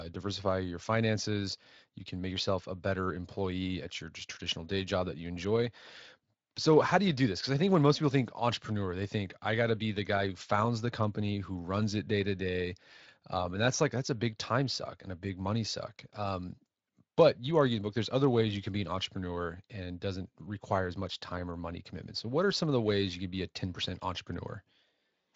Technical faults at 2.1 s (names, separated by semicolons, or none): none